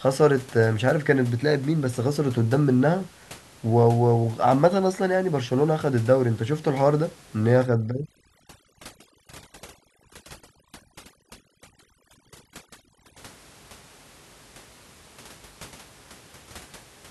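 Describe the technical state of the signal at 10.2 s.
Overdone noise removal runs from 7.60 to 13.18 s, covering 10.2 s. An over-aggressive denoiser pulls bands near its noise estimate down to almost nothing, so the room noise (about 26 dB below the speech) collapses into twinkling specks.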